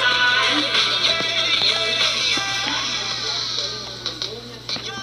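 No technical faults are audible.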